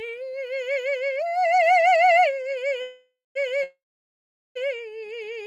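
At 2.81 s the music stalls in a call audio freeze. The last sound carries on as a fading buzz or hiss, then about 0.19 s of silence, until 3.37 s. At 3.63 s it happens again, lasting to 4.57 s, with about 0.78 s of silence. Each time the music resumes where it stopped, so nothing is lost. The cause is likely delayed packets draining the jitter buffer. Each stall adds delay: 0.54 s, then 0.92 s more.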